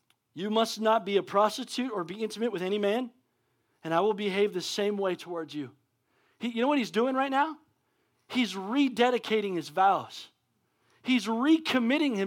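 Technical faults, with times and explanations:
Nothing technical goes wrong anywhere in this speech recording, so there's nothing to list here.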